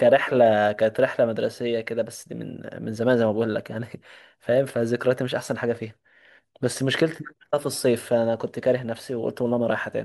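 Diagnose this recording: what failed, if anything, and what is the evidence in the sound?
Nothing in the speech recording points to a failure at any stage, so there's nothing to diagnose here.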